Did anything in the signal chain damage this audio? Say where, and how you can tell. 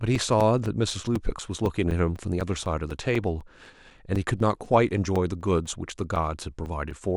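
Yes. At the driver or USB stage, periodic USB or driver dropouts punch roughly 4 ms of silence into the speech every 0.25 s from 0.15 to 6.91 s, about thirty in all. A background task stalls the bus, so samples are lost. The waveform shows evenly spaced flat gaps, and the spectrogram shows regular thin vertical broadband stripes that tick only during signal.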